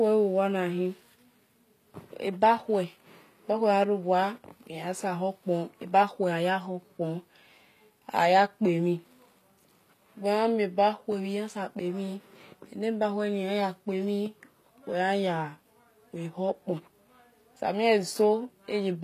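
From start to finish the speech carries plainly audible codec damage, likely from HE-AAC compression at a low rate consistent with roughly 24 kbps. Only the lower spectrum is coded directly; the treble is synthesized by copying lower bands upward and fitting them to a coarse envelope, so its harmonics fail to align with those below. The result is gritty, metallic, lisping s sounds, with nothing present above 14.9 kHz.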